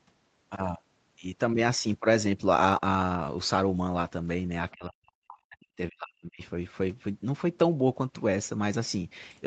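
From 4.72 to 6.41 s the echo canceller likely took the local talker for loudspeaker echo while both sides spoke at once, and turned it down along with the echo. This is speech suppressed in double talk. The speech sinks and breaks up in pieces for about a second and a half in total, at worst dropping by roughly 40 dB to near silence. Through all of it the audio keeps the call path's 8 kHz ceiling, consistent with Opus at a moderate bitrate.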